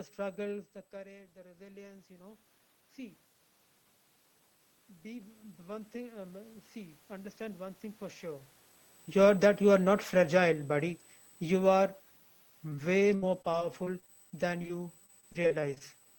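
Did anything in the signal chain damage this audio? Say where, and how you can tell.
Yes. USB whine runs through the whole clip: a fixed tone at 8 kHz, strongest at its 16 kHz harmonic, about 25 dB below the speech. USB frame current is leaking into the analogue power or ground wiring of the interface.

Automatic gain rising, in call processing, at 0.91 to 3.27 s (+7 dB) and 5.02 to 8.28 s (+5 dB). The speech and room noise swell together. In the first case the AGC is chasing a 17 dB input drop after the talker moved back around 0.5 s.

Automatic gain falling, also in call processing, from 9.08 to 10.98 s. The speech sinks with its background by 3 dB as the AGC pulls gain down, shortly after the talker moved around 8.5 s.

Repeated packet loss (robotic sound), a network fault, from 12.69 to 15.82 s. A couple of dozen holes, the longest 71 ms, are patched by extending the previous sound. 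That is about 14% of the stretch, and it gives the speech a choppy quality.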